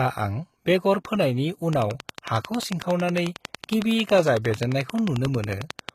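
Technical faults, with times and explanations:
Throughout: HE-AAC compression, plainly audible. The speech treble is rebuilt by copying lower bands upward rather than kept. Harmonics fail to line up across the crossover, so s sounds turn gritty or metallic. A low bitrate, around 20 kbps, is the likely cause.
1.73 to 5.90 s: train of clicks, starting just after "बेगर फोनायनि". Similar pulses tick over the speech at a regular 11.1 per second, about fifty in all. They stand about 15 dB above the signal. Interference or a faulty connection is the likely source.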